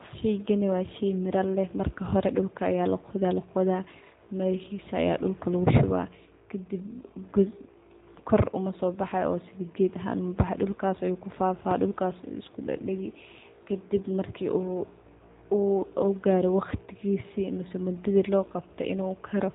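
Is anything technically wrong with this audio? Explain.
Yes. Throughout the speech, the sound is thin and boxed-in, with a slightly rough, synthetic grain. Nothing comes through above about 3.8 kHz, so sibilants lose their edge and air. This is the plainly audible signature of the G.729 codec, at a rate that fits 8 kbit/s. It rebuilds each 10 ms frame from a vocal tract filter, a pitch predictor and a few coded pulses rather than the waveform, leaving that buzzy, artificial texture.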